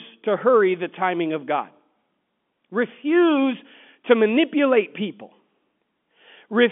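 No faults found: the speech sits in a standard telephone band of about 200 Hz to 3.4 kHz, with nothing above 3.7 kHz, which fits a 64 kbps mu-law line.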